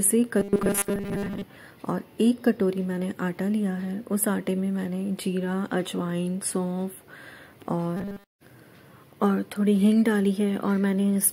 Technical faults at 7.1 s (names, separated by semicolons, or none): none